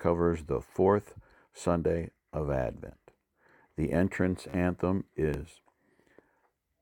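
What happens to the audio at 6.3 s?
At 6.27 s the audio jumps forward, most likely a dropped buffer (overrun): roughly 20 ms of samples were overwritten before being read, and the two sides butt together. The waveform shows an abrupt discontinuity, and the spectrogram shows a thin vertical broadband line.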